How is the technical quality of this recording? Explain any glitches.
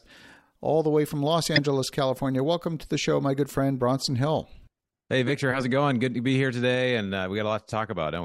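The recording has one audible glitch, a corrupt frame decoded at 1.54 to 1.59 s. Damaged bits in the compressed stream were still decoded, so misread gains and codes placed energy at wrong frequencies for a couple of frames, producing a brief, loud chirp-like burst over the speech.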